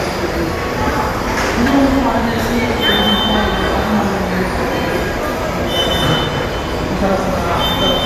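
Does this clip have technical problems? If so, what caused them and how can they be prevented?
No, there are no technical faults to point to in this recording of sounds. Nothing calls for a cause or a preventive step.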